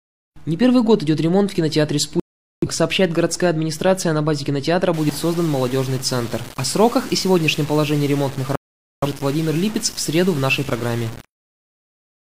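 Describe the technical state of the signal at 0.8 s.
At 0.8 s the signal is intact, with no audible dropout, distortion, clipping or other fault at that point.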